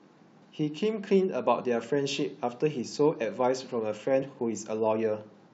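At 1.59 s and again at 4.22 s there's a quick glitch, each gone in under 20 ms. That's damaged data in a compressed stream: bad bytes made the decoder misread those frames, lose sync and hunt for the next frame header.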